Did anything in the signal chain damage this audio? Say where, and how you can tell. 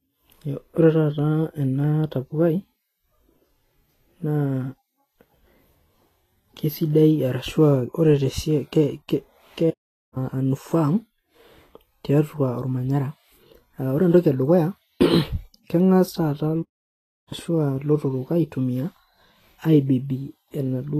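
Yes. At the codec stage, nothing above 14.2 kHz for the whole clip, plus lingering smeary artefacts, suggests low-bitrate audio saved at a high bitrate, likely a weak earlier encode re-saved as MP3.

At playback, there are two playback stalls, 9.70–10.17 s and 16.62–17.33 s (0.46 s and 0.69 s). Sound halts then resumes, likely from buffer starvation.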